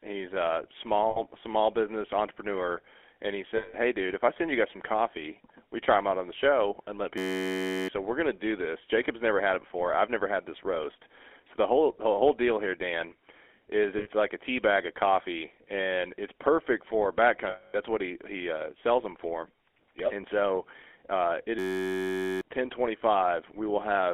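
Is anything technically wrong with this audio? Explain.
Yes, there are three faults.

Throughout, the speech has passed through the GSM full-rate codec at 13 kbps. The codec rebuilds the voice from a vocal-tract model driven by coarse pulse excitation, which gives a constant buzzy, gravelly roughness. Band limiting to 250 Hz–3.4 kHz makes it sound thin and telephone-like.

Lost GSM frames occur four times: 1.10–1.20 s (60 ms, between "he's a" and "small business entrepreneur"), 3.56–3.75 s (180 ms), 13.98–14.09 s (80 ms), and 17.50–17.77 s (240 ms, between "and it's perfect for" and "what he he uh"). Each gap is filled by repeating the last good frame, so the sound is held as a rough, metallic ring.

A system hang loop occurs at 7.18–7.88 s and again at 21.59–22.41 s, just after "so uh it". A 10.67 ms slice of audio, which fits a 512-sample buffer, repeats exactly at 93.8 Hz, 66 and 77 times respectively. 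This produces a steady, undecaying buzz and wipes out about seven tenths of a second of speech. The buzz does not fade, which separates it from the lost frames.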